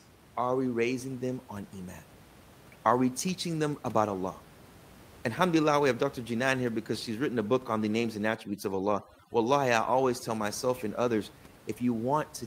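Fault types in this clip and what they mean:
Overdone noise removal: from 8.36 to 10.43 s, overly aggressive noise reduction shuts off bands near the room-noise floor, leaving the background broken into twinkling specks.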